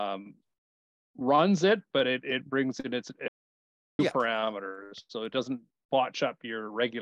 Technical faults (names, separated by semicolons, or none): audio dropout to silence